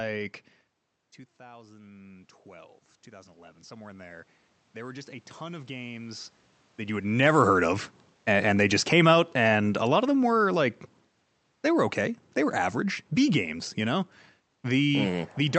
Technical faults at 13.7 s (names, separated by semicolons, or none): none